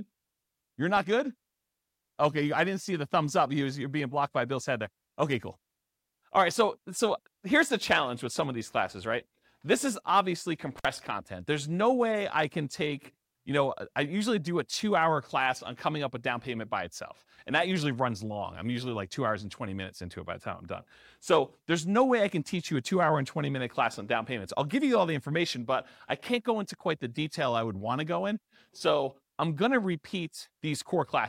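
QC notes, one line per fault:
10.78–10.85 s, intermittent contact: right after "is obviously" the speech cuts out for about 52 ms, with crackle at both edges. A loose plug or cable conductor momentarily breaks and remakes the signal path, and the unstable contact at make and break produces the crackle.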